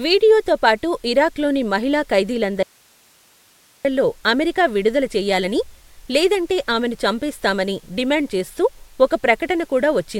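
From 2.63 s to 3.85 s the speech is hit by an audio dropout to a faint residue. For about 1.22 s the signal vanishes abruptly and only hiss remains, roughly 35 dB below the speech level. The likely cause is a brief loss of the wanted input while the path downstream stayed live. On the waveform the envelope collapses to a thin noise band with sharp edges, and the spectrogram shows a vertical gap filled with even, broadband hiss.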